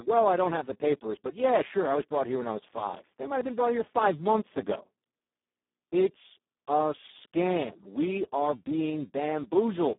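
Speex codec damage runs through the whole clip: the speech is hoarse, noisy and close to robotic, which points to Speex's lowest settings, around 4 kbps. So few bits go to the excitation that the signal is rebuilt almost vocoder-style, confined to a 200 Hz to 3.6 kHz line band, with nothing above 3.8 kHz.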